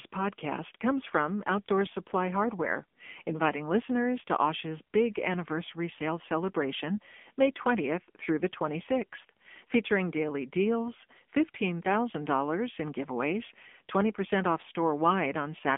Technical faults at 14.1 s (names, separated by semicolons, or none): AMR narrowband mobile codec